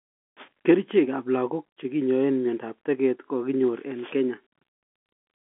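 No faults are present in the speech; the narrow telephone band, roughly 250 Hz to 3.5 kHz, is the expected result of G.711 telephone coding working as designed.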